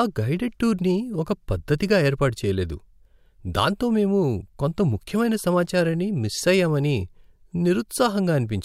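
No technical faults can be heard anywhere in this recording.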